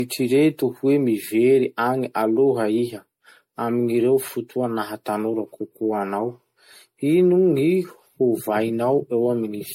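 Throughout, the speech sounds swirly and hollow with blurred attacks, consistent with generation loss, likely from several MP3 re-encodes near 64 kbit/s. The spectrogram shows patchy holes and nothing above 16.6 kHz.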